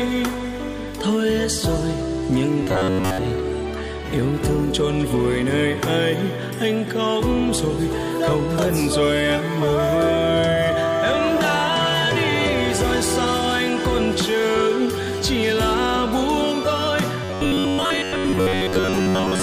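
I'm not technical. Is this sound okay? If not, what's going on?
No. From 2.63 to 3.19 s, and again from 17.24 s to the end, new audio was likely arriving too slowly, so the system kept replaying a tiny slice of about 11 ms for most of that time. The result is a robotic sound from repeated short buffers: a rigid, metallic buzz repeating about 94 times a second.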